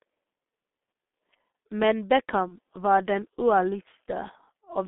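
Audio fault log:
Throughout: G.723.1 codec, heavy damage. The low-rate coder at about 6.3 kbit/s squeezes the sound into a 200 Hz to 3.6 kHz band and models it coarsely, so it comes across muffled and hoarse with smeared consonants; a spectrogram shows nothing above 3.6 kHz and blurred, blocky detail.
2.48 to 2.56 s: VoIP packet loss concealed by the speech codec, just before "var den". One 30 ms frame went missing, and the decoder kept repeating its last pitch and filter at falling gain, so a brief fading stretch of buzzy tone or coloured noise replaces the lost piece and the sound stays weakened until recovery; the waveform shows a smooth, decaying stretch.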